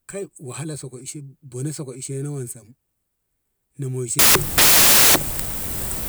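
At 4.19 s the speech gives way to samples built from the wrong bytes, lasting through to the end at 6.08 s. The reader is combining each sample's bytes incorrectly, so the rapidly changing low-order bits end up as the large part of every value. The result is loud, harsh broadband noise, close to white on the louder sounds. Unlike ordinary background hiss, the noise is loud rather than sitting beneath the signal.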